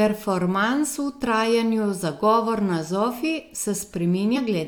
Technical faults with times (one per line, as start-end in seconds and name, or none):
4.34-4.38 compressed frames skipped